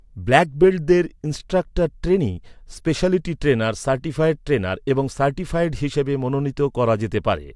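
No technical faults are audible anywhere in the recording.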